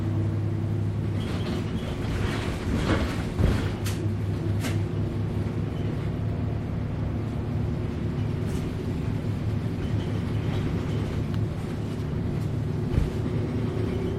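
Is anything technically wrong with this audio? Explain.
No, the recording of sound shows no technical faults at any point.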